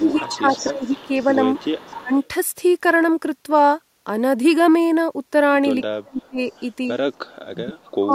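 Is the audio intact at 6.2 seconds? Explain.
No. From 5.92 to 6.39 s the speech sinks by as much as about 30 dB, likely speech suppressed in double talk: an echo canceller, hearing both sides at once, treated this talker as loudspeaker echo and turned everything down, leaving the sound dipped.

Overlapping this, from 6.22 to 6.6 s, a very faint copy of the voice, some 35 dB down, trails 257 ms behind. This is likely echo leak, where residual loudspeaker pickup slipped past the canceller and returned as a delayed ghost.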